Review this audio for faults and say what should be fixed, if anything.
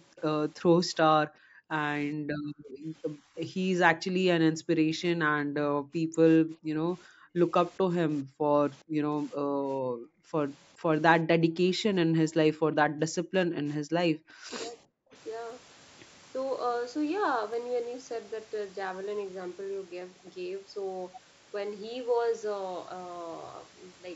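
At 0.16 to 0.21 s there is an echo leak. A very faint copy of the speech, about 30 dB down, arrives roughly 414 ms late. The likely cause is a far-end echo canceller letting residual loudspeaker pickup through. Better canceller tuning or a headset would prevent it.

The background is gated by the echo canceller at 0.68 to 4.57 s, 6.46 to 7.38 s and 9.8 to 11.66 s. The room tone drops by up to about 40 dB while the loudspeaker plays, then returns. Gentler suppression with comfort noise would prevent it.

The speech is suppressed in double talk at 2.12 to 2.54 s, 4.79 to 6.16 s, 7.81 to 9.49 s and 12.27 to 15.15 s. The talker dips by up to about 40 dB or cuts out in pieces. The likely cause is the canceller misreading overlap as echo. A double-talk detector that holds the near talker would prevent it.

There are dropped samples at 15.50 s and 17.54 s. Each is a single sharp click where the waveform jumps. 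The jump fits a few samples likely going missing in buffering. Stable buffer handling between capture and encoding would prevent it.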